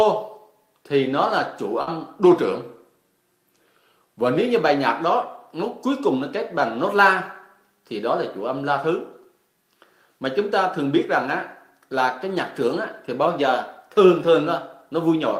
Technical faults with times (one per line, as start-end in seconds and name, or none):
1.81-1.90 burst of packet loss
2.23-4.38 drift correction step
13.28-14.47 drift correction step